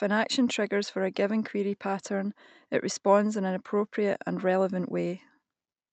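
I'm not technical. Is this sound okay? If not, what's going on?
Yes, this speech sounds fine; nothing is going wrong.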